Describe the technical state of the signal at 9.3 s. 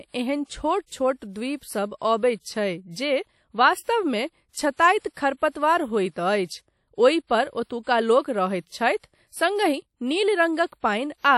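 WMA compression, likely, runs through 9.3 s: long transform blocks smear quantisation noise into a ringing, washy hiss, nothing above 17.5 kHz, which fits a low bitrate near 48 kbps.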